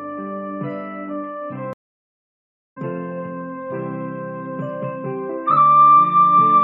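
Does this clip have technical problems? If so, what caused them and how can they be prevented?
Yes. There's a stream reconnect at 1.73 s: the audio drops to silence for about 1.03 s, then comes back at 2.78 s roughly 0.7 s further along, because the player lost the connection and restarted its decoder mid-stream. A larger buffer plus automatic resume-from-position would prevent it.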